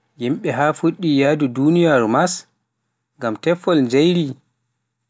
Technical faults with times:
none

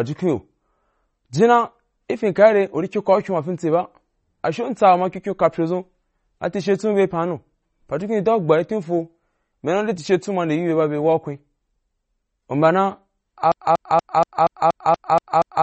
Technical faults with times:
0.00-15.63 MP3 compression
13.52-15.63 broken-record loop

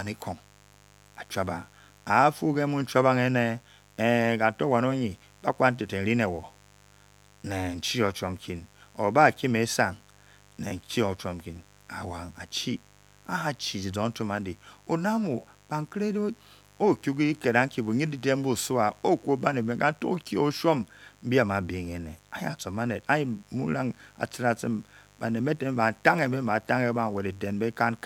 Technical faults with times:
0.00-28.05 mains buzz

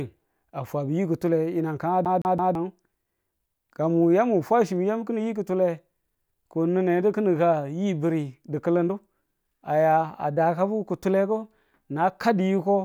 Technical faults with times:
2.05-2.55 CD stuck on one turn

